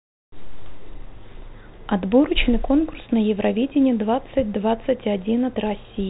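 No faults are audible.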